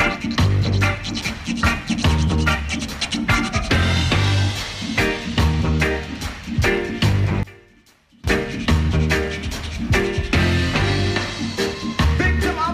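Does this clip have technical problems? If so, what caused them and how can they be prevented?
Yes. From 7.43 to 8.24 s the sound drops by about 24 dB. The likely cause is one channel inverted. With reversed polarity, everything shared by left and right cancels when summed to mono. Only a faint difference signal remains. Prevent it by checking the polarity of each channel and listening to the mix in mono before delivery.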